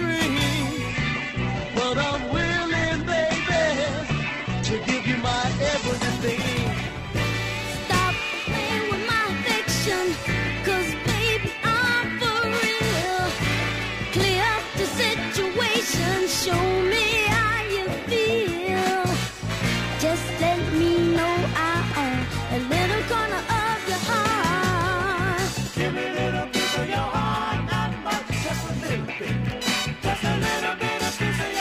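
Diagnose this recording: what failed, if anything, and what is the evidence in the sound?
A call bitrate drop in the call processing and codec stage: the bandwidth estimate fell, and the encoder was forced to spend far fewer bits from 0.91 s to 9.19 s. The sound loses its top end, with content above about 8 kHz gone, and turns coarse and watery. That fits a fall from around 64 kbps to roughly 9 kbps. The worst stretch lasts about 4.5 s before the bitrate recovers and full bandwidth returns.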